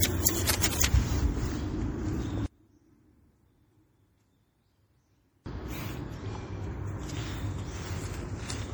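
Right from the start the whole clip has a swirly, hollow smear with blurred attacks, likely generation loss from a few passes through MP3 at roughly 64 kbit/s. From 0.46 to 0.82 s there's a burst of rough scratching about 5 dB below the sound, likely cable scratch noise from a worn connector being moved. Then from 2.46 to 5.46 s the level drops by about 31 dB, leaving only a faint trace, likely because one channel is inverted and the common content cancels when summed to mono.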